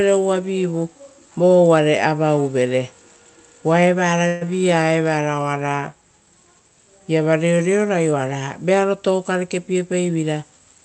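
At 4.27 s there's a short call audio freeze lasting about 0.16 s. The sound doesn't drop out. The last bit gets stretched into a brief buzzy fill that fades, and then the audio carries on from exactly where it stopped. About 139 ms is filled in and nothing is lost, so everything after it sits that much later. The likely cause is packets held up in transit, which left the jitter buffer empty until they caught up.

From 9.67 s to 10.24 s there's a jitter buffer speed-up. The receiver had more audio queued than it wanted, so it trimmed tiny pitch-period-sized slivers over and over, roughly 40 ms in all. That makes the speech run at about 105% of normal speed with no change in pitch. It comes across as a slight rush near the end rather than anything chipmunky. The call path itself sounds like Opus, with highs cut off around 8 kHz and coding texture that fits a 32 kbps stream.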